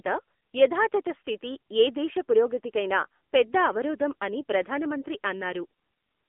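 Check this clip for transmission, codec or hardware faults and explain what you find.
One fault runs throughout: AMR narrowband mobile codec damage. The speech sits in a telephone band of 250 Hz to 3.5 kHz, with nothing above 3.7 kHz. Rebuilding the voice from a vocal-tract model and sparse pulses leaves a plainly buzzy, synthetic edge, which fits a low mode near 7.95 kbps.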